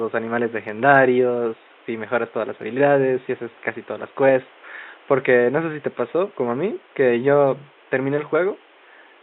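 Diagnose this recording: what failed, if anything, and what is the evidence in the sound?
Nothing failed; only faint room noise underlies the speech.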